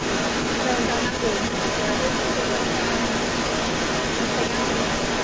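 From 0.0 s to 5.23 s, an echo leak runs through the whole speech clip: a distinct delayed copy of the talker trails the original by about 427 ms, at a level around 5 dB above the direct speech. The likely cause is a far-end loudspeaker whose echo canceller let its microphone's pickup return down the line. Unlike room reverberation, which smears into a decaying tail, this is a separate repeat arriving almost half a second later.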